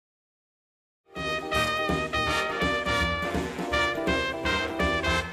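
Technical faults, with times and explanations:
Nothing technical goes wrong here; the sound simply eases in with a smooth fade from about 1 s until it reaches full level at 1.45 s.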